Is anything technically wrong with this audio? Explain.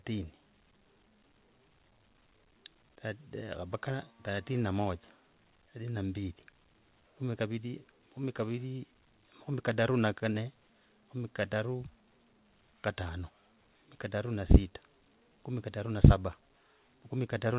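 No, nothing is technically wrong with this speech.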